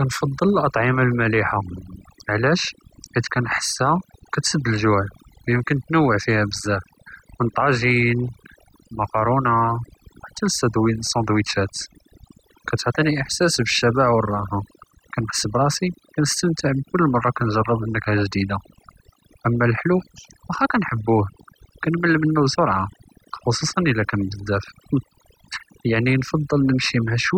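Throughout the speech, overdone noise removal leaves the background lowered and broken up into twinkling specks. These are individual bands gated out, not lowpass dullness.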